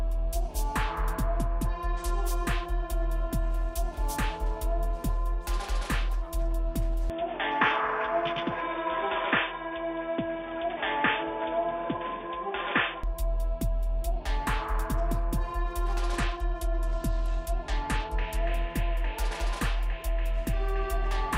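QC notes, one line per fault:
1.33–2.24 s, 7.51–8.61 s and 16.11–18.46 s, Bluetooth SBC bit pool drop: three times the top end goes dull and a gritty, grainy noise creeps in, then clears once the link recovers. The encoder squeezed its bit budget, sounding like a drop from a bit pool of 28 to about 12 (around 96 kbps), so the highest sub-bands got starved and the rest were quantised coarsely. The middle one lands inside the switched stretch below.
7.10–13.04 s, input switched to a poorer device: with no gap and no real jump in level, the sound suddenly turns narrow and boxy, with nothing above 3.6 kHz, and a new noise floor shows up roughly 35 dB under the signal. Then it opens back up at 13.04 s. The likely cause is the system flipping to a lower-grade mic or a headset call profile for that stretch.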